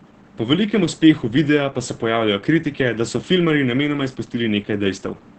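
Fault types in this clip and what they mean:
Opus voice compression: The speech has passed through Opus in its SILK linear-prediction mode, with the band limited to 8 kHz and the excitation coded coarsely, which fits a rate near 10 kbps. It sounds muffled, hoarse and slightly robotic throughout. On a spectrogram, energy stops flat at 8 kHz with nothing above, and harmonics look smeared and blocky in steps that fit 20 ms frames. The waveform looks smoothed and loses fine detail.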